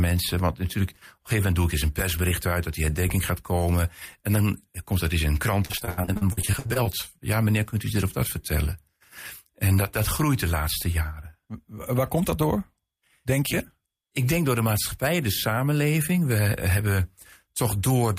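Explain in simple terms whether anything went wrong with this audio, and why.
Something did go wrong, right after "eens in een krant". From about 5.65 to 6.87 s you get repeated packet loss, the robotic sound kind. Chunks of the audio went missing over and over, well over a dozen times, with the longest hole around 79 ms. Each time, the receiving end papered over the gap by stretching the last bit of sound, so roughly 40% of that stretch is filler. That's why it turns choppy, with pieces missing.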